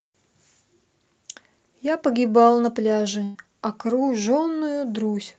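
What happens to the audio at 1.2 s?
Nothing goes wrong at 1.2 s: the speech passes through intact, carried by the call path with the narrowed, codec-coloured sound that path gives it throughout.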